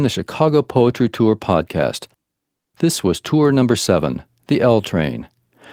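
A speech recording with one burst of packet loss, from 2.59 to 2.68 s. For about 60 ms the receiver's concealment stretches the last received sound and fades it, so it smears into a held, dimming tone or hiss instead of cutting to silence. The speech then resumes with about 60 ms skipped. That smeared fill followed by a jump forward separates it from a plain dropout, which simply goes quiet without skipping ahead.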